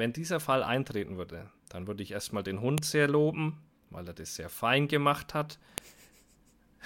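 At 2.78 s, between "würde ich erstmal den" and "sehr loben weil er", and again at 5.78 s after "sehr fein gemacht hat", a sharp snap marks a file header played as audio. Pieces about 3 s long were joined with their headers left in, giving a brief spike on the waveform and a thin full-height vertical line on the spectrogram.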